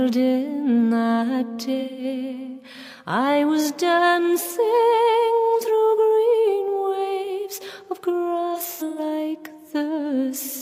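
AAC frame loss with concealment smears the audio from 1.80 to 2.04 s and again, in scattered bursts, from 8.54 to 8.99 s. The decoder rebuilds missing frames from the last good spectrum. A spectrogram shows blurred, frozen bands where the waveform detail goes mushy.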